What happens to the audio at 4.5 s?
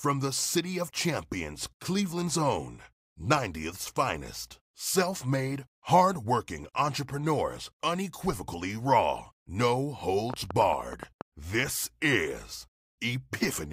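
Nothing goes wrong at 4.5 s; the speech runs straight through that moment intact.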